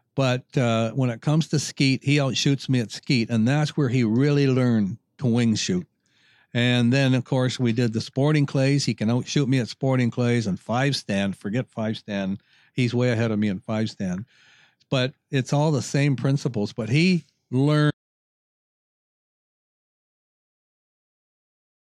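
At 17.91 s the speech cuts off mid-flow and never returns. This is an audio dropout to silence lasting about 3.9 s, to the end. The gap is silent with no room tone, likely from the input being lost while recording continued.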